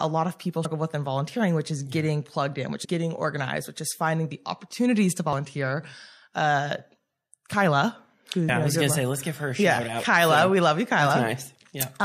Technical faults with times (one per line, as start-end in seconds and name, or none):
0.64 compressed frames skipped
2.84 compressed frames skipped
8.48 compressed frames skipped
11.09 compressed frames skipped